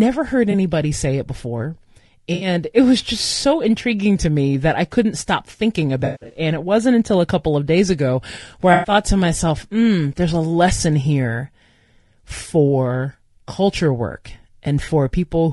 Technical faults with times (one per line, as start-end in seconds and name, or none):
0.00-15.52 low-delay AAC compression
0.51-0.55 AAC frame loss with concealment
2.33-2.47 AAC frame loss with concealment
5.99-6.39 AAC frame loss with concealment
8.73-8.91 AAC frame loss with concealment
14.85-14.89 AAC frame loss with concealment